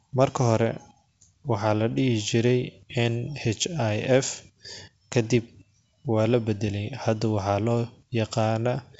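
No technical faults can be heard in this recording.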